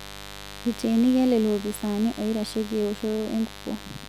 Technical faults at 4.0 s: mains buzz

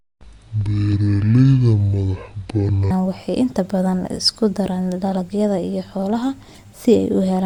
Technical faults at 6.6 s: corrupt frame decoded

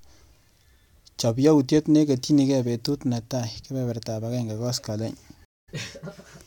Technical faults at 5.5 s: stream reconnect

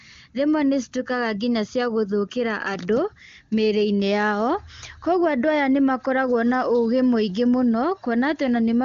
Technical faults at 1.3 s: none

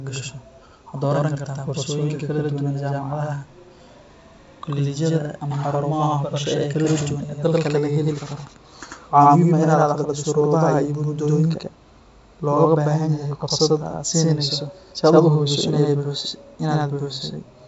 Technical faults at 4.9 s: channel delay (doubling)

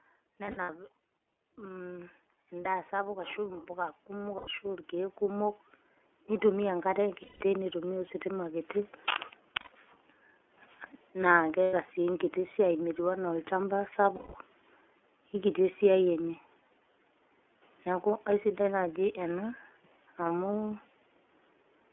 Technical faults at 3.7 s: iLBC codec; automatic gain rising

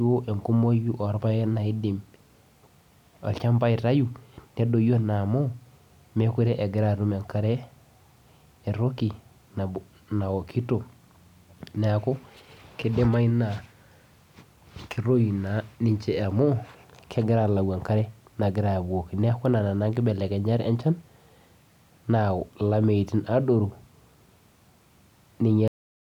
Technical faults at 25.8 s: cut-off end

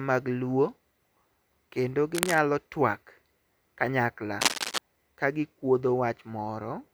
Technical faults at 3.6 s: none

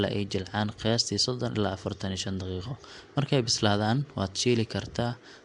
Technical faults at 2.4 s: Nellymoser compression

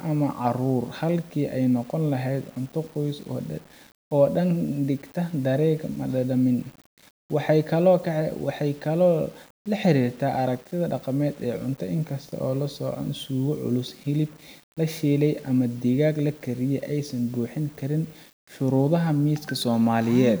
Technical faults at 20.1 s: low bit depth without dither

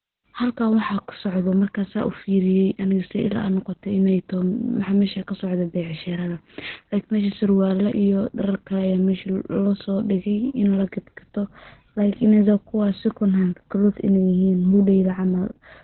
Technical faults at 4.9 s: Opus voice compression

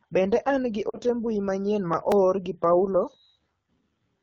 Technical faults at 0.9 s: AMR wideband (HD Voice) codec; lost AMR speech frames

